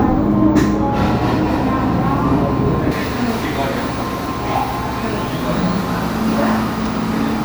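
From 0.0 to 2.92 s, de-emphasis applied wrongly cuts treble about 11 dB at 10 kHz, dulling the sound; a spectrogram shows high frequencies smoothly fading.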